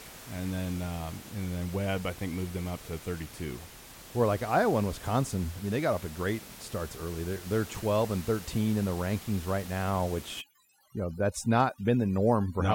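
From 10.41 s to the end at 12.75 s, just after "the rankings right now", overdone noise removal sets in. The room noise, at about 18 dB below the speech, drops and breaks up into twinkling specks. Unlike a noise gate, which cuts everything at once, this thins individual frequency bands.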